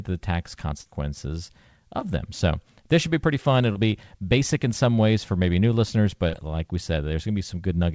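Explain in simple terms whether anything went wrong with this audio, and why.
Four times in this speech, at 0.82 to 0.87 s, 1.99 to 2.03 s, 3.73 to 3.77 s and 6.29 to 6.35 s, a short bit of sound goes smeary or wobbly. That is short concealed packet loss. Between 20 and 40 ms of the call arrived too late, and the receiver invented a stand-in by stretching the sound just before. Because the gaps are filled, you hear a brief blur or wobble, not the silent hole a plain dropout leaves. The call's normal missing treble above 8 kHz is not part of this.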